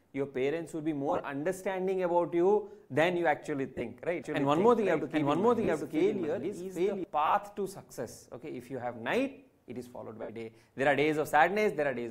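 Five short stretches of the audio break into a brief noisy smear, where tonal content turns grainy and hissy before recovering: at 1.09 s (about 60 ms of damage spread over 105 ms), 3.69 s (60 ms over 120 ms), 5.64 s (37.5 ms of damage), 7.26 s (52.5 ms over 75 ms) and 10.22 s (a 67.5 ms gap). These are lost LE Audio frames. The LC3 decoder covers each missing frame by reusing the previous spectrum with randomised phase, which blurs tones into noise. The scattered runs fit losses of roughly 7.5 ms frames, with the longest unbroken runs around 20 to 30 ms. From 4.24 s to 7.04 s the whole sound is heard twice. A second full-band copy at about the same loudness trails roughly 700 ms behind, with no reverberant tail or room colour, and it cuts in and out abruptly at those two points. This is a doubled audio track, most likely from the same signal being picked up again through a slower second path and mixed back in.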